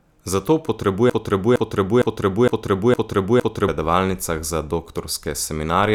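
From 1.10 s to 3.68 s, a fragment of about 0.46 s repeats six times back to back, stuck like a broken record, before the speech resumes at "predavalnicah za". This broken-record loop likely comes from a stalled player or stream resending its last buffered piece, so the speech due in that span is lost.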